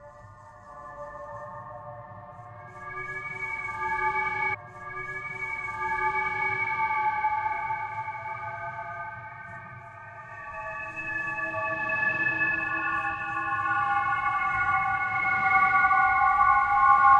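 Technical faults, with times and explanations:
4.53–6.53 s, stream segment repeated: the player fetched or queued the same stretch of stream twice, so about 2.0 s of sound plays a second time. A small blip marks the jump back to the segment's start, where the waveform doesn't line up.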